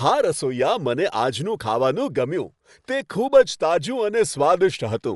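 From start to finish the speech sounds dull and plainly damaged, with nothing above about 11.4 kHz and a rough, fluttering noise clinging to voiced sounds, the likely mark of Dolby Digital compression at a low rate that fits roughly 64 kbps. Starved of bits, the encoder cuts the top band and leaves many frequency lines to be refilled with dither noise. A spectrogram shows a hard ceiling at 11.4 kHz and speckled, noisy gaps between the harmonics.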